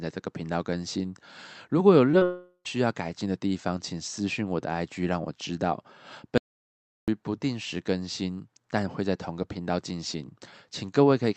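This is a speech clip carried over a call link, with the top end stopping around 8 kHz as you'd expect from Opus at that setting, and it has some real trouble. Right at 2.11 to 2.15 s and again at 2.19 to 2.23 s there's short concealed packet loss: about 20 ms of audio went missing each time, and the decoder papered over it by stretching the sound it already had, so you hear quick smeary wobbles where a consonant can get swallowed. Straight after, from 2.25 to 2.67 s, it turns into what's likely a long network dropout. Roughly 400 ms never arrived, the concealment keeps extending the last sound as a fading buzzy tail, and that tail gives way to about 70 ms of near silence before speech resumes with that stretch simply gone. Later, from 6.38 to 7.08 s, there's an audio dropout to silence: about 0.7 s of dead silence with no room tone at all, cutting in and out mid-flow. That looks like the input itself dropped, likely a device or link glitch or a stray mute, rather than the network, since there's no concealment smear, just a hard hole where the audio was lost.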